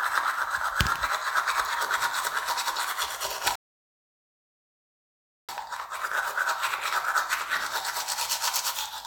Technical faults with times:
3.55-5.49 rebuffering stall

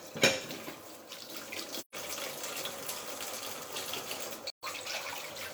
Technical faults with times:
1.78-1.95 AAC frame loss with muting
4.50-4.63 AAC frame loss with muting

